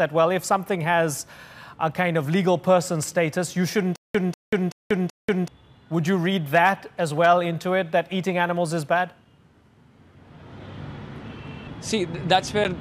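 A playback or streaming stall, likely, sits between 3.96 and 5.48 s: each time the player retried, it replayed the last fragment it had and then ran dry. The result is a stutter with silent gaps, where the same burst of about 194 ms comes back four times at a steady 380 ms period, each separated by roughly 186 ms of digital silence, and the audio that belonged in that stretch never arrives. Separately, some stage in the chain was driven past its limit, so peaks were sliced flat, which is hard clipping. It shows up at 6.55 to 6.69 s and 7.24 to 7.30 s with about 2 dB of overdrive, and again briefly at 12.32 to 12.35 s with about 1 dB. The flattened tops add high harmonics, heard as short crackles on those loud moments.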